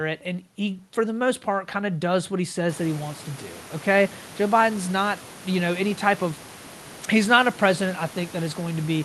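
There are no technical faults to describe in time order; the background room noise that rises at about 2.5 s belongs to the recording itself, and the call path's coding is working as it should.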